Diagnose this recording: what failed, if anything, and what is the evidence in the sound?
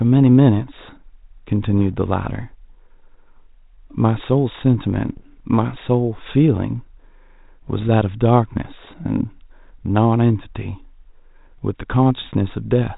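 The failure is in transmission: bit errors on an ADPCM link, heard within a G.726 stream whose 32 kbit/s coding keeps everything below 4 kHz. Pops and rough, gravelly bursts with brief level jumps appear at 1.78–1.94 s, 5.08–5.40 s and 7.68–7.85 s, which suggests an error rate of a few tenths of a percent. Each flipped bit corrupts the decoder's step size and predictor, so the damage rings on for milliseconds. Packet loss would instead leave gaps or smoothed repeats.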